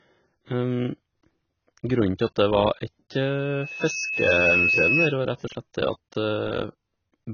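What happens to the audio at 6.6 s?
At 6.6 s the speech is dull and smeared with no content above 6.5 kHz, as it is throughout: likely heavy AAC compression, consistent with roughly 16 kbps AAC-LC.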